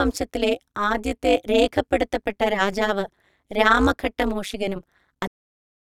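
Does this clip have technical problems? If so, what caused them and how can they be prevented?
Yes. Overlap-add ripple runs throughout: the speech is resynthesised with an overlap whose windows don't sum flat, producing an about 60 dB level ripple around 200 Hz, heard as a metallic buzz. Use window and hop pairs that satisfy constant overlap-add.

A cut-off end at 5.27 s stops the speech mid-sound, dropping straight to digital silence because the final buffers were never written. Flush and drain all buffers before closing the stream.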